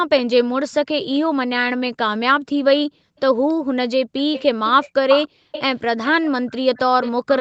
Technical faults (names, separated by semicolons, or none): echo leak; background gated by the echo canceller